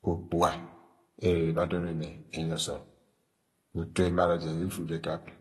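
From start to finish the speech sounds dull and smeared, with a fizzy, warbling edge on sibilants and nothing above 12 kHz. The likely cause is AAC compression at a low bitrate, consistent with AAC-LC around 32 kbps, starving high bands and coarsely quantising the rest.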